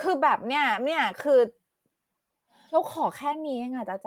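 No technical faults turn up anywhere in the recording. There is no moment in the speech that needs a time stamp or a note.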